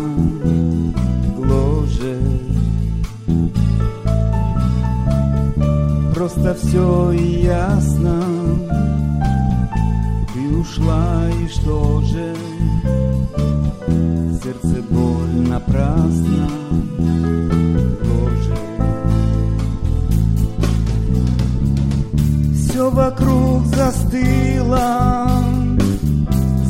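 Listening through the clip, nothing stood out as a technical problem at any point.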